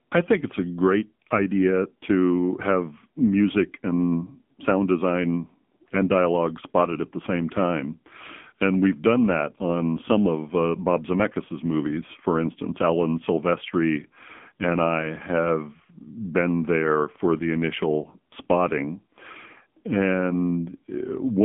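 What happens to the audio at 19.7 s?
At 19.7 s the speech is still passing through the AMR narrowband mobile codec, as it does for the whole clip. Nothing above 3.7 kHz survives, and the band sits roughly between 150 Hz and 3.5 kHz. The codec rebuilds the voice from a vocal-tract model excited by a few pulses per short subframe. Here that rebuild is coarse. The voice sounds buzzy and synthetic, which fits a low bitrate near 6.7 kbps.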